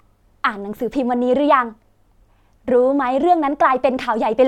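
No technical faults are audible.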